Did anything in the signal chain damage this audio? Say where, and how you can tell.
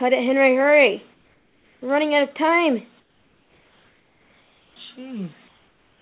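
Yes, in call processing: comfort noise in place of the background at 1.14–1.82 s, 3.0–4.76 s and 5.48 s to the end. The pauses turn steady and about 6 dB quieter, smooth on a spectrogram and an even, featureless band on the waveform, likely from discontinuous transmission.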